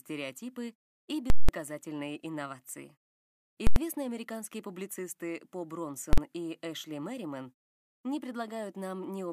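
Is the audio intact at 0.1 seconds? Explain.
Yes, at 0.1 seconds the audio is intact, with no fault present at that moment.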